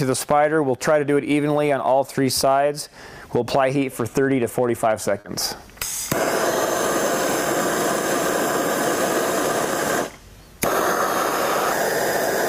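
The clip is a stretch of audio with one short concealed packet loss at 5.20 to 5.26 s. About 40 ms never arrived in time. The receiver extended the preceding sound to cover the gap, then blended back. It is heard as a brief smear or wobble.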